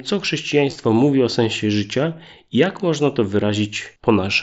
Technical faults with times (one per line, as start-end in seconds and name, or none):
0.69-0.76 concealed Bluetooth headset packet loss